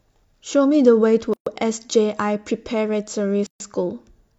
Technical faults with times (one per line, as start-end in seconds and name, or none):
1.33-1.46 gap at a join of encoded pieces
3.46-3.60 gap at a join of encoded pieces